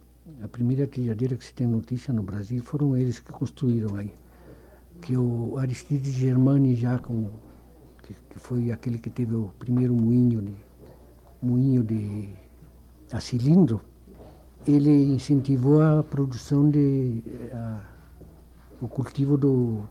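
No technical faults can be heard anywhere in it.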